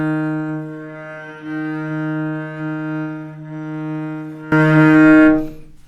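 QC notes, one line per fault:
4.52 s to end, sudden gain jump: the sound and its background noise leap up together by about 18 dB in one step and stay there, with no fade-in, most likely a digital gain setting applied instantly from one sample to the next without a ramp.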